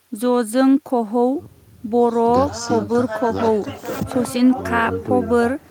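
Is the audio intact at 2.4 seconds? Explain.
Yes, at 2.4 seconds the audio is intact, with no dropout, click, distortion or other fault at that moment.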